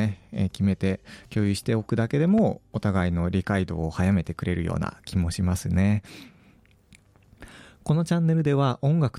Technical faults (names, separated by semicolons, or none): loud pop